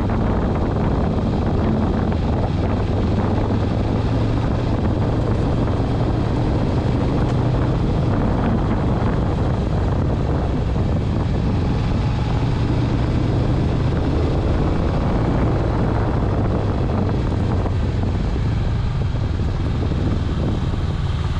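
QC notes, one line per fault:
5.43–5.64 s, 6.89–7.06 s, 15.04–15.21 s, 16.51–16.72 s, 18.75–18.97 s: frames out of order. Two adjacent blocks of about 78 or 105 ms, consistent with three or four frames each, play swapped, producing a garbled flutter but no lost time.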